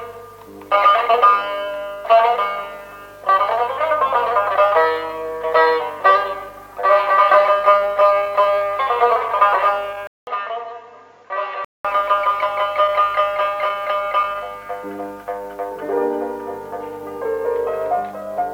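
From 10.07 to 11.85 s, the capture path most likely switched inputs, an input switched to a poorer device whose narrower band cuts everything above 7.2 kHz. The change opens with a 200 ms silence, after which the sound turns dull and boxy, drops roughly 10 dB in level, and carries a new, faint background noise far beneath the signal. At 11.85 s the fuller, brighter sound returns.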